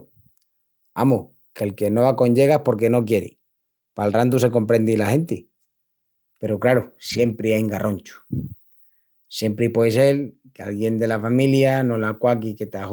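A speech recording with lost packets rebuilt from error correction at 4.33–4.35 s, before "se comprendi la genti", and 7.09–7.31 s, before "ain garronchus". Low-bitrate backup copies fill both spans, so the waveform shows no gap, but the spectrogram turns grainier and noisier there. The 20 ms patch fits one lost packet; the 120 ms one, six separate ones.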